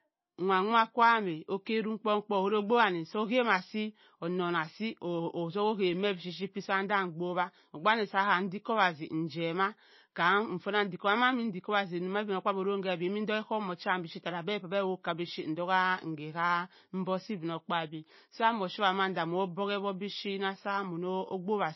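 From start to finish the speech carries plainly audible codec damage, most likely MP3 compression at a starved bitrate, with the sound pointing to something near 24 kbps. The encoder has discarded everything above 5.8 kHz, so sibilants lose their edge, and weak frequency lines drop in and out between frames, giving a watery, swirling texture. A spectrogram shows a flat ceiling at 5.8 kHz and speckled, patchy gaps in the upper bands; consonant onsets appear smeared.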